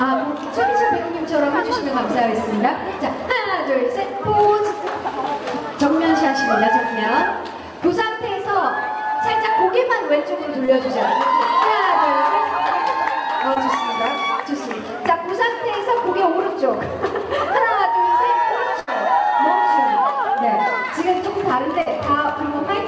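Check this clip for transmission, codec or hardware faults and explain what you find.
Two kinds of packet-loss fault are present. The audio has passed through a call codec with nothing above 8 kHz, which fits G.722 at 64 kbps.

Short concealed packet loss occurs at 10.66 to 10.70 s, 13.54 to 13.58 s and 21.82 to 21.88 s. Each time, a packet of about 20 ms, or 40 ms in the last case, failed to arrive at the decoder in time. The receiver covered the hole by carrying the preceding sound forward, from its pitch or as shaped noise, then crossfaded back into the real signal. Each one is heard as a brief smear or wobble, longer at 21.82 s.

A burst of packet loss runs from 18.80 to 18.89 s. Roughly 80 ms of consecutive audio was lost or arrived too late to play. The concealment extended the last sound through about 74 ms of that gap while fading it down, so it is heard as a held buzz or dying hiss. 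Playback then resumes further along, with the audio from the gap missing.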